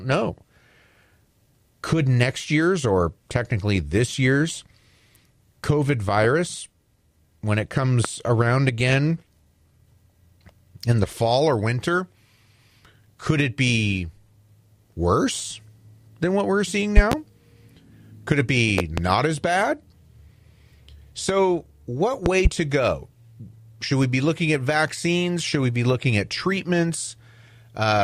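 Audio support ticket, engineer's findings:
Loud pop x4, sitting well above the speech by roughly 15 to 20 dB, with speech continuing underneath. Single pop at 8.05–8.08 s, between "when it" and "around again". Double pops at 16.97–17.15 s, 18.78–19.01 s before "as bad", and 22.26–22.49 s before "to go". Likely a loose plug, static or a switching transient hitting the line.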